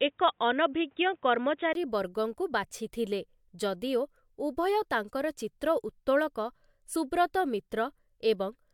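From the start to 1.75 s the speech is dull, with nothing above 3.8 kHz and a faint noise floor, then a 20 ms gap; likely the input switched to a poorer device. At 6.95 s a brief blip marks damaged data in the compressed stream, where the decoder lost frame sync.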